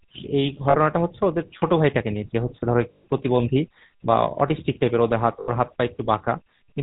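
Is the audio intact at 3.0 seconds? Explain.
No. From 2.92 to 3.05 s the sound freezes into a rough, metallic ring. These are lost GSM frames: the decoder repeats the last good frame's settings across the 120 ms gap, which fits six 20 ms frames.

Underneath, the same moment carries a plainly audible buzzy, gravelly roughness with nothing above 4 kHz. That is the GSM full-rate codec, consistent with a 13 kbps stream. It rebuilds the voice from a vocal-tract model driven by sparse, regularly spaced pulses.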